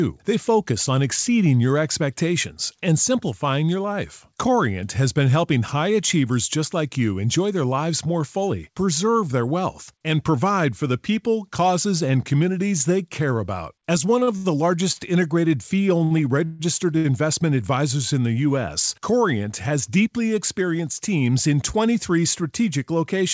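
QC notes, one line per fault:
14.20–14.98 s, repeated stalls (stutter): packets kept arriving later than playback needed them, so the jitter buffer emptied four times in under a second. Each gap, the longest about 74 ms, was bridged by extending the preceding sound, about 158 ms in all, so the passage drags and stutters with nothing lost.
16.04–16.13 s and 16.97–17.06 s, short stall from a late packet: a single packet missed its slot each time, leaving the jitter buffer empty for about 63 ms and then 69 ms. The receiver held the last sound until it arrived, giving a briefly over-long sound with a slight buzz or dip, then resumed without loss.
16.45–16.61 s, call audio freeze: the audio halts for about 149 ms while the preceding sound carries on as a fading buzz or hiss, never dropping to silence, then resumes exactly where it stopped. The likely cause is packets held up in transit draining the jitter buffer, inserting a gap rather than removing anything.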